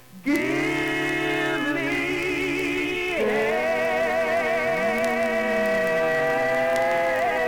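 From 0.11 s to the end, the sound carries word clock ticks: a sharp click roughly every 30 ms, around two hundred in all. The receiving device is running on its own clock rather than locking to the sender's, with a mismatch on the order of 700 ppm. Each time the clocks slip, a single sample is dropped or repeated. A spectrogram shows evenly spaced thin vertical broadband lines, and a zoomed waveform shows a one-sample step or spike at each one.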